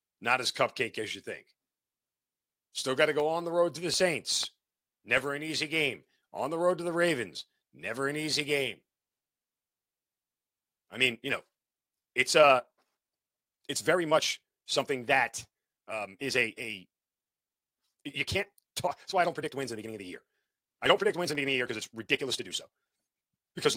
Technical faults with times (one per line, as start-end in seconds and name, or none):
3.20-5.42 CD scratch ticks
6.70 electrical switching spike
10.94-23.76 time-stretched section
20.86-22.34 CD scratch ticks